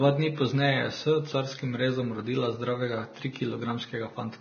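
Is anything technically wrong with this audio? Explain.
Yes, the whole clip carries heavy Vorbis compression damage, most likely from a low-bitrate encode, something around 18 kbps by the sound of it. Nothing survives above about 6.5 kHz, so the speech sounds dull up top. Below that, the treble is quantised so coarsely that real detail gets swapped for noise of similar energy. That leaves a hissy, grainy texture, with roughened tones and consonant attacks smeared rather than crisp.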